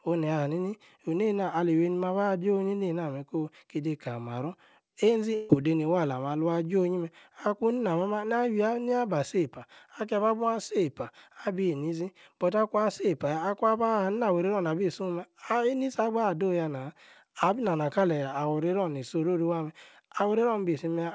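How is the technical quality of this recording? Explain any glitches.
The recording carries one glitch, heard through a call path that passes nothing above 8 kHz, which fits a G.722 wideband codec. At 5.35 to 5.50 s, a burst of packet loss leaves a gap that the receiver fills for about 143 ms by extending and fading the last sound, so it comes out as a held, dimming buzz or hiss. The speech then jumps ahead, with about 150 ms missing.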